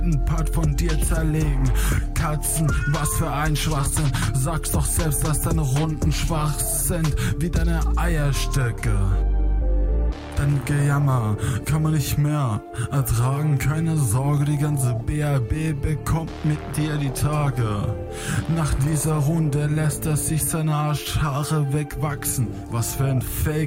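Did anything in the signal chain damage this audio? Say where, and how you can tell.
Yes. A train of clicks, likely from interference, a faulty connection or power supply in the analogue wiring, adds about ten regular pops, 5 per second, from 12.56 to 14.58 s.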